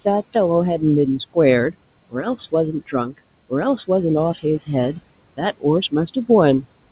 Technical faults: noise suppressor artifacts; speech cut by the noise suppressor

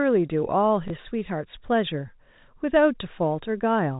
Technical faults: packet loss with last packet repeated

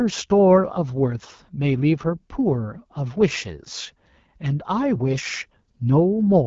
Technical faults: AMR wideband (HD Voice) codec

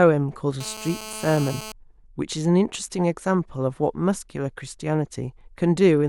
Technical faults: GSM phone buzz

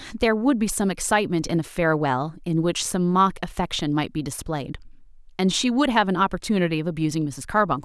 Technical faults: none

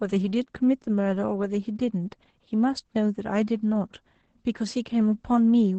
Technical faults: Opus voice compression

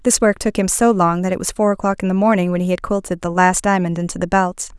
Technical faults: none

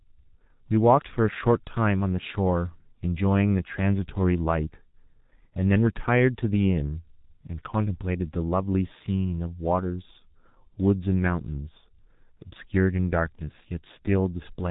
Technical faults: G.723.1 codec

